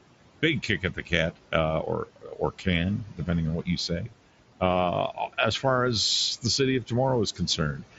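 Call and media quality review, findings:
Noise suppressor artifacts, whole clip. Room noise, sitting about 16 dB under the speech, pumps down by about 18 dB in pauses and rises back under speech. Component: noise suppressor. Mechanism: per-frame band gains driven by a stationary-noise estimate, so attenuation tracks speech activity and leftover noise bins fluctuate between frames.

Speech cut by the noise suppressor, at 0.42–1.54 s, 2.06–2.67 s, 3.05–3.29 s, 3.63–4.13 s, 5.14–5.64 s and 7.35 s to end. Soft consonants and word tails swallowed, with drops of about 13–16 dB. Each span loses roughly a tenth to a third of a second of actual speech. Component: noise suppressor. Mechanism: low-level speech bands misclassified as noise and gated with the background.

Concealed Bluetooth headset packet loss, 2.28 s, inside the second suppressor cut. Brief, barely audible. Component: headset Bluetooth link, mSBC wideband path. 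Mechanism: about 7.5 ms missing, which fits one lost frame. Receiver filled the gap by repeating the best-matching stretch of recent waveform, so a single loss stays nearly hidden.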